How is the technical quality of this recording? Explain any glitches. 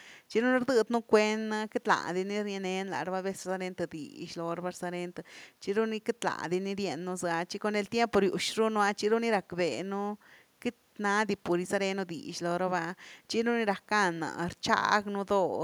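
No glitches or technical faults can be heard here.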